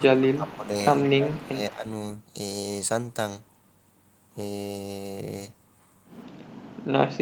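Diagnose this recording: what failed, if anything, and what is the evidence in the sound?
Echo leak in call processing: a faint copy trails the speech by 174 ms, about 25 dB down, at 0–0.04, 0.24–0.67, 1.04–1.1 and 1.31–1.37 s, likely residual echo the canceller missed.

Speech suppressed in double talk, also call processing: level dips by up to roughly 15 dB within 0–0.73 s and 1.16–1.85 s, likely the canceller attenuating near-end speech during overlap.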